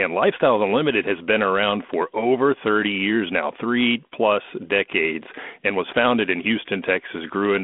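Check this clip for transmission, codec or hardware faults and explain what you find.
No faults detected.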